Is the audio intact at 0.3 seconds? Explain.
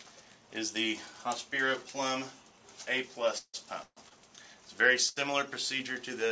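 Yes, at 0.3 seconds the audio is intact, with no dropout, click or distortion, only the ordinary coding character of a G.722 call path, which leaves nothing above 8 kHz.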